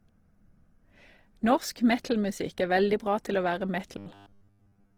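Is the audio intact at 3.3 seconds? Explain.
No, a low-bitrate Opus encode, likely around 16 kbps in music mode, runs throughout, so band-filling makes the speech at 3.3 seconds rough and grainy.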